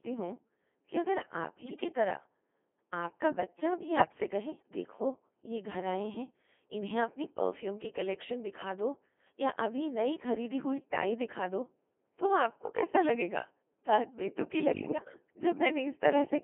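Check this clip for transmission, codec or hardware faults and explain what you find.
Two faults are present: the whole recording has passed through a very low-rate vocoder, and three short stretches are corrupted by radio bit errors.

Codec 2 vocoder, throughout: The speech was reduced to pitch, voicing, energy and a spectral envelope, then rebuilt from sine waves, so none of the original waveform survives. The robotic, buzzy quality fits the 2.4 kbit/s mode. The damage is heavy, and the sound sits within roughly 250 Hz to 3.4 kHz, giving it a thin, radio-like band.

Bit errors on digital voice radio, at 1.66 to 1.84 s, 3.98 to 4.24 s and 14.74 to 15.06 s: Flipped bits, on the order of one in ten in the first two bursts and slightly fewer in the last, corrupted the parameters that set each frame's pitch, level, voicing and spectrum. The synthetic speech lurches in pitch and loudness, changes tone colour, and breaks into warbling, bleeping gibberish in each burst.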